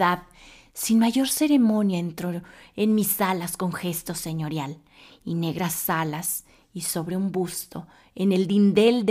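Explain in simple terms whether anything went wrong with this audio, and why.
A bit error spike occurs at 4.24 seconds, just after "mis alas con gesto". It is a single sharp tick. Digital audio is stored as a list of numbers, one per tiny slice of time. Here one bit in a single number flipped, in memory or while the data was being passed along. That one number jumped far from its true value and the next was correct again, so you hear a brief click with no connection to the speech.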